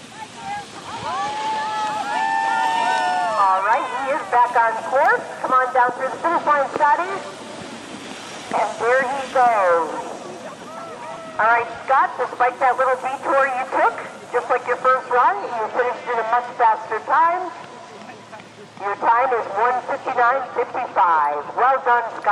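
At 11.17 s there's a repeated buffer: new audio didn't arrive in time, so the device replayed its last tiny chunk twice more. At about 2.7 ms each, fitting a 128-sample buffer, the repeats come across as a quick click or buzz, dropping about 5 ms of audio.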